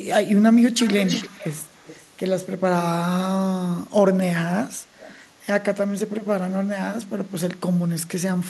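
An echo canceller on a loudspeaker side likely failed to remove all of its microphone pickup, causing echo leak. From 0.79 to 2.06 s, a copy of the speech trails 320 ms behind at about 10 dB down. At 4.99 to 5.2 s, a much fainter 320 ms echo briefly returns.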